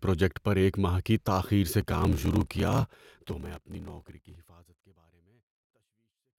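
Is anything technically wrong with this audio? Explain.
Yes. From 1.79 to 4.36 s there is a block size mismatch (padded). Each written block falls short of what the next stage reads, and the remainder is zero-filled, which fits 1024-sample blocks read as about 1152. The gaps cause a 38.3 Hz buzz, and the speech runs slowed to 0.889 of normal speed at about normal pitch. The fade-out beginning around 2.5 s is a deliberate smooth edit, not a fault.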